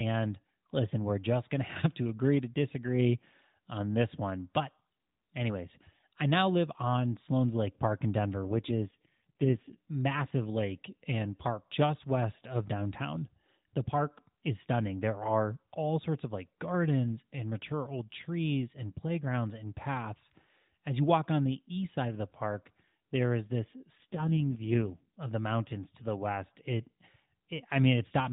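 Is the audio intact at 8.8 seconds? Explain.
No. An AMR rate drop runs from 8.43 to 9.76 s. Over that stretch the voice turns rougher, buzzier and more synthetic than the surrounding speech, then recovers once the rate climbs back. The bandwidth stays the same narrowband 4 kHz ceiling and there is no gap. The network likely stepped the mobile codec down from about 12.2 kbps to its lowest mode, near 4.75 kbps, to spend bits on error protection over a weak link, leaving too few pulses to model the voice.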